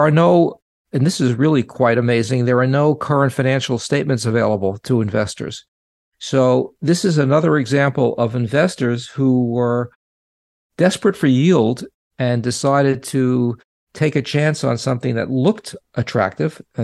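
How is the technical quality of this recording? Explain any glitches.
Listening to this speech recording, nothing stood out as a technical glitch.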